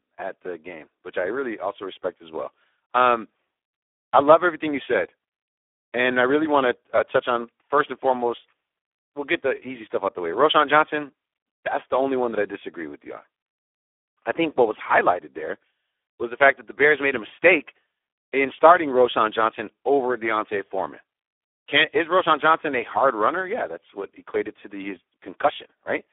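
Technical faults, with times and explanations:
Throughout: Speex codec. The speech is hoarse and noisy, typical of heavy Speex coding. The degradation fits a low setting around 8 kbps, where the CELP coder has too few bits to model the excitation. Usable content sits in a telephone-style band of roughly 300 Hz to 3.5 kHz, and nothing is present above 3.8 kHz, so the speech sounds dull and boxed-in.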